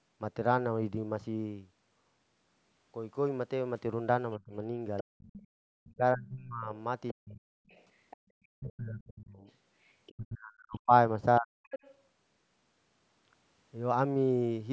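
A speech recording carried over a call, with its band ending at 8 kHz as the call's microphone processing shapes it, and with echo-canceller trouble through the middle. From 4.39 to 7.47 s and again from 8.5 to 11.63 s the talker is repeatedly pushed down, in spans adding up to about a second and a half and then about two seconds, with the deepest cuts around 40 dB. This is most likely speech suppressed in double talk: with both ends speaking, the canceller treats the talker's energy as echo and attenuates it. On a waveform the envelope shows sudden notches and collapsed sections, and on a spectrogram the harmonic bands thin out or vanish in patches. Running alongside, a second voice is audible from 4.97 to 5.48 s and from 7.08 to 11.95 s, sitting roughly 20 dB under the talker. That is likely the other side's voice leaking through: the far end plays from a loudspeaker, and the canceller fails to strip all of it from the microphone. 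On a spectrogram it appears as faint, separate harmonic traces that don't follow the main talker's pitch. Finally, from 8.17 to 8.22 s the room tone itself drops by about 33 dB for roughly 50 ms and then returns, which is background gated by the echo canceller clamping the microphone while the loudspeaker is active. It shows as a short, sharp-edged hole in the noise floor across all frequencies.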